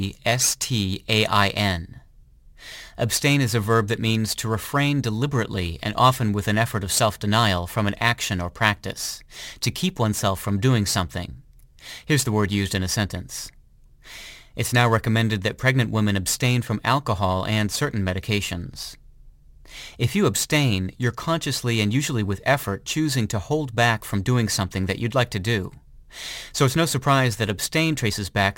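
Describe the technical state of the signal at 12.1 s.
A gritty, inharmonic fizz rides on the louder and brighter parts of the speech, about 20 dB down, from crude rate conversion present throughout, likely from 44.1 to 48 kHz with samples simply repeated, leaving no filtering.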